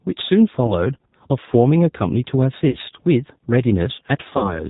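G.729 codec damage runs through the whole of this speech clip and is plainly audible: the sound is band-limited, with nothing above 4 kHz, and has a slightly rough, synthetic texture. This fits an 8 kbit/s G.729A stream, where the decoder rebuilds each 10 ms frame from a vocal tract filter, a pitch predictor and a handful of pulses rather than the original waveform. VoIP packet loss concealed by the speech codec occurs at 0.66 to 0.74 s, 2.69 to 2.78 s and 4.27 to 4.61 s. About 20 ms and then 40 ms of audio are missing in the first two events, and in the last 120 ms is lost in pieces across 160 ms, with the longest gap 60 ms. In each gap the decoder stretches its last pitch and filter into a fading buzzy tone or coloured noise. Because every frame builds on the one before, the sound stays weak or distorted for a short while after audio resumes, which is why each event lasts longer than the loss itself.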